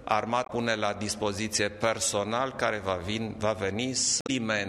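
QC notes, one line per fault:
0.43–0.50 s and 4.19–4.30 s, damaged data in a compressed stream: corrupted bytes make the decoder misread frames and lose sync before locking onto the next valid header, giving a brief chirp, squawk, click or short hole. The spectrogram shows sudden hard-edged disruptions, and the waveform shows abrupt discontinuities.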